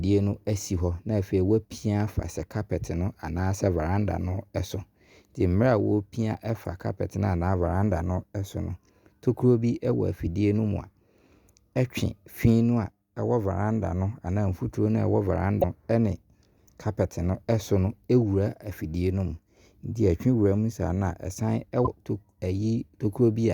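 Speech with damaged data in a compressed stream: brief glitches at 6.65 s between "mmerɛ a wo pia" and "carpet no anaa sɛ", 15.58–15.64 s before "ɛne carpet", and 21.83–21.88 s, where corrupt frames desynchronise the decoder. Each shows as a narrow broadband vertical streak on a spectrogram and a jagged waveform discontinuity.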